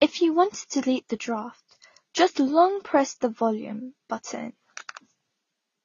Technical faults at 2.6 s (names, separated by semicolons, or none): transcoding between lossy codecs